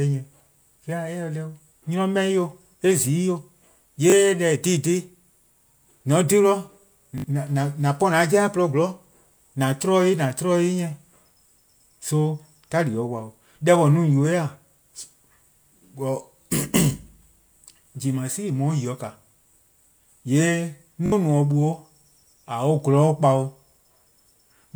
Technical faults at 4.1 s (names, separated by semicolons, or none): repeated buffer